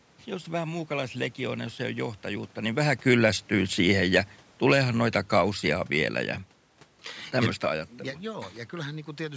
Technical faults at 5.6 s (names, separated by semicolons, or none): automatic gain falling